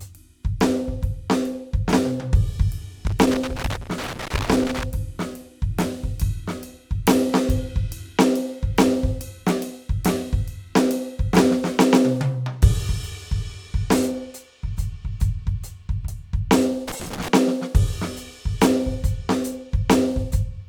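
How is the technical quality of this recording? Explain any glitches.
The music is marred by loose connector crackle in two places: 3.07 to 4.84 s and 16.88 to 17.28 s. A worn or dirty contact intermittently breaks the signal path, chopping the music and adding pops from stray DC, heard as irregular scratchy bursts.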